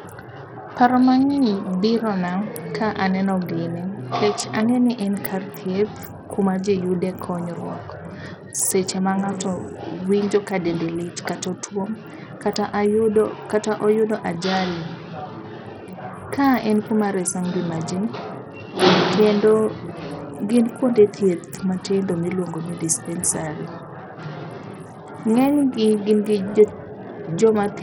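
Throughout the speech, the treble flickers in and out over a gritty, grainy noise floor, the signature of heavy Bluetooth SBC compression, likely at a starved bit pool fitting roughly 64 kbps. On a spectrogram the upper bands show ragged, blocky gaps and smeared aliasing.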